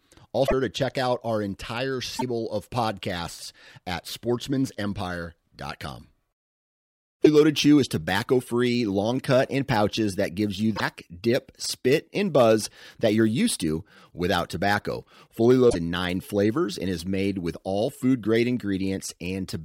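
The speech glitches briefly at 0.46, 2.18, 7.22, 10.75 and 15.69 s, each lasting about 40 to 70 ms, under three 26.1 ms frames, and jumping ahead. That's likely a broken MP3 bit reservoir: frames went missing, so the next ones read borrowed bits from the wrong frame.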